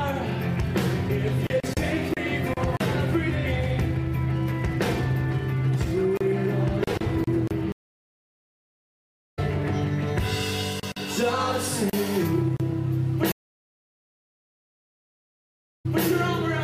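At 7.72 s the audio drops out for 1.6 s, a stream reconnect. The connection broke and the player restarted its decoder in mid-stream. When sound returns at 9.39 s, it has jumped ahead by about a second and a half, so that stretch is simply gone. A second stream reconnect starts at 13.32 s, with 2.5 s of silence. This time the audio resumes at 16.05 s about 235 ms earlier than where it stopped, so a short stretch repeats.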